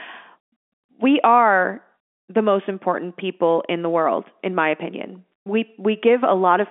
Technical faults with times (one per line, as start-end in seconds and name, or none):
none